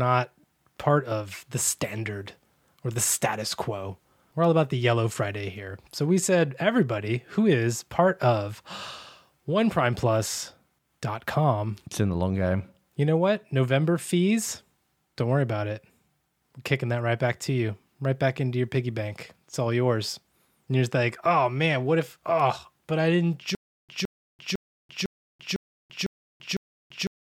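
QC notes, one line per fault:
23.55–27.23 s, stutter with silent gaps: the stream likely stalled, replaying a 166 ms fragment then 337 ms of digital silence every 0.5 s after "oh but I didn't".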